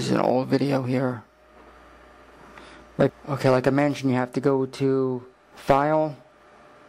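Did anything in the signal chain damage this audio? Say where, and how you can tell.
No, nothing in the signal chain damaged this audio.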